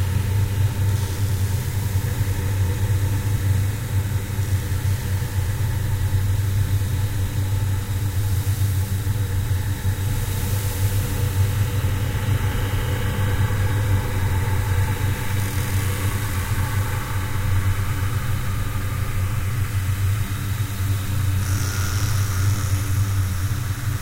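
No technical faults occur at any point in the audio, so there is nothing to describe in time order.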